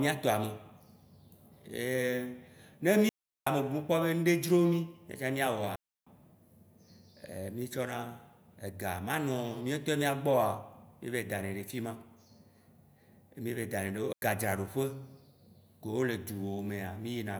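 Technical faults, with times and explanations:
3.09 to 3.47 s, 5.76 to 6.07 s and 14.13 to 14.22 s, digital wireless dropouts: the receiver lost too much of the link and muted for about 380 ms, 310 ms and 100 ms, leaving clean near-silent holes in the speech with no crackle or noise burst either side.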